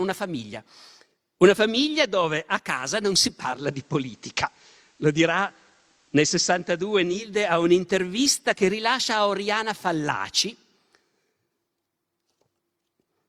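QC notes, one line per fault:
3.39–7.31 s, digital radio blending to analogue: the receiver lost its digital feed and cross-faded over about 0.27 s to the FM copy of the station, then back. You get faint hiss well below the speech, and level unchanged.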